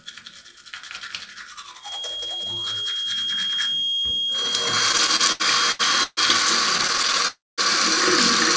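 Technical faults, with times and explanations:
1.77–6.44 s, feedback whistle: a thin, steady 3.3 kHz tone about 10 dB under the sound, swelling and fading slowly, likely a loudspeaker-to-microphone loop hovering right at the edge of feedback.
4.92–6.20 s, repeated stalls (stutter): nine hiccups, the longest 138 ms, with nearly a third of the span filled by stretched-out sound as the jitter buffer kept running dry.
6.73–7.27 s, repeated stalls (stutter): eleven very short catches of up to 12 ms, with about a fifth of the span patched by continued sound, so the audio judders rather than drops out.
7.28–7.61 s, call audio freeze: the sound hangs for about 0.3 s, fading to silence for roughly 210 ms, then resumes where it left off, likely packets held up in transit.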